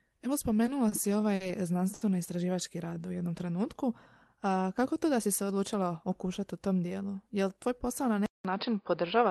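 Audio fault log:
0.89 s, 1.35 s, 1.94 s: short stall from a late packet, three times. Each time the sound holds on its last moment and then carries on from exactly where it stopped. The holds last 30 ms, 50 ms and 70 ms and end at 0.94, 1.42 and 2.03 s. The jitter buffer ran dry waiting for a late packet and stretched what it had. No speech is skipped, unlike a lost packet. Instead the delay grows by the length of each hold, giving a drawn-out sound rather than a gap or a jump.
5.04–5.82 s: jitter buffer speed-up. The speech just before "okušati u tom dijelu" runs slightly fast, at about 105% of normal pace. The buffer had built up extra delay and trimmed it by cutting out tiny pitch-period slices again and again, removing roughly 50 ms in total. The pitch is unchanged, which sets it apart from a resampling or tape-speed fault. What you hear is a hurried rhythm, not a higher voice.
8.26 s to the end: input switched to a poorer device. 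Right after "tvoj posao na" there is a silence of about 0.19 s. The sound then comes back duller and boxier, with a level shift of about 5 dB, and a new background noise floor around 55 dB below the speech. Before the switch, the call codec carried content up to about 12 kHz, so this abrupt narrowing, along with the new tone and noise, likely comes from a change of microphone or a headset call profile, not from the codec.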